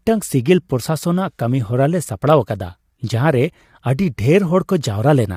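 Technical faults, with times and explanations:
Throughout, low-delay AAC compression: the speech sounds rough and grainy across the whole clip, with a noisy haze filling the gaps between the pitch harmonics and a top band that comes across thin and synthetic. This plainly audible damage is likely from AAC-ELD coding, whose very short frames cannot separate closely spaced harmonics well and spend more bits per second on side information, leaving too few for detail at a rate that fits about 32 kbps.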